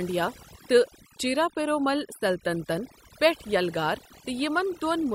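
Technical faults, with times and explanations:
Throughout: overdone noise removal. A noise reduction stage was pushed far too hard on this speech, so every frequency band that sits near its estimate of the background is pulled deep down or switched off. The gaps between phrases drop away, broken by isolated twinkling specks where stray bands flicker on and off, and the softer parts of the speech are cut away with the noise.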